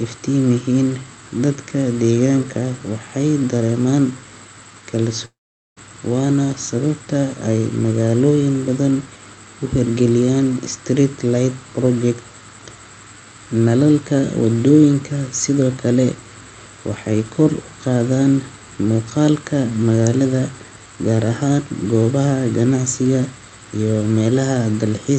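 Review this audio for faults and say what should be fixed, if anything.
A long network dropout, likely a stall in packet arrival, cut the incoming stream from 5.25 to 5.78 s. Concealment stretched the last sound into a fading buzz, then left about 0.44 s of silence before the audio resumed at "waana sababta ay", with roughly half a second of content lost. The call path's 8 kHz band limit is audible alongside it. Adding redundancy or forward error correction and a more stable network route would help the receiver ride out such gaps.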